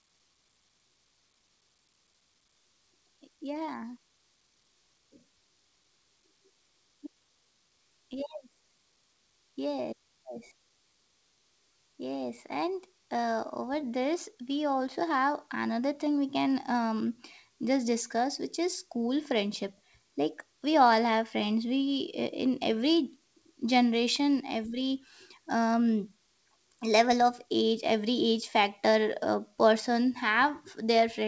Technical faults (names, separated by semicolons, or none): none